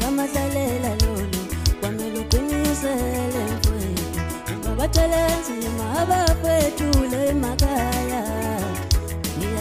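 No technical faults are audible.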